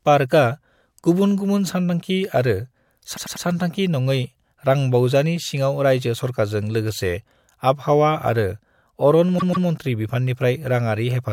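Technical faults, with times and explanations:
3.16–3.45 s: repeated frames. A 96 ms block plays three extra times, a stutter that adds 288 ms. This fits a run of about four compressed frames resent. Unlike a dropout, nothing goes missing; identical sound recurs.
9.37–9.66 s: repeated frames. A longer 144 ms block, about six frames, plays twice more. It also adds 288 ms.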